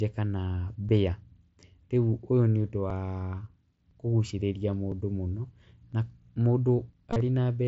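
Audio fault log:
0.89, 1.90, 2.90, 3.91, 4.92, 5.93 and 6.93 s, overlapping chunks: at each of these joins, one second apart, the next chunk begins about 7 ms before the previous one finished, so that sliver of audio plays twice. The doubled fragment breaks the waveform's continuity, giving a small click or stutter that returns at a steady once-per-second rhythm, a regularity that points to fixed one-second processing blocks rather than anything in the speech itself.
7.10 to 7.21 s, concealed Bluetooth headset packet loss: across roughly 105 ms, about 52 ms of audio never arrived from the headset, with the longest gap near 30 ms. The receiver filled each hole by repeating the best-matching recent stretch of waveform, so short losses are largely masked, but the longer run comes through as a brief buzzy, held tone at full level followed by a slight warble as the genuine signal resumes, with the mSBC link's wideband sound carrying on around it.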